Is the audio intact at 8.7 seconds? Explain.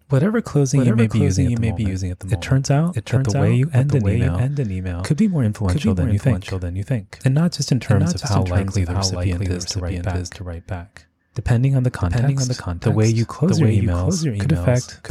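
No. A doubled audio track runs through the whole clip, including 8.7 s: a second full-band copy of the speech trails about 0.7 s behind, a few dB quieter, likely from a slower capture path. Unlike an echo or reverb, this single copy carries no decay or room colour.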